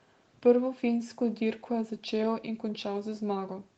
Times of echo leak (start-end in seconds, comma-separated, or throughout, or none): 0.00-0.31